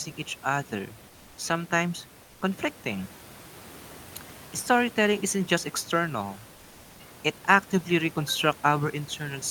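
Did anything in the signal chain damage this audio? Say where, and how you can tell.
Yes, in the codec: from 2.23 to 2.41 s comfort noise in place of the background appears as a smooth, featureless spectrogram band about 2 dB lower, likely from discontinuous transmission.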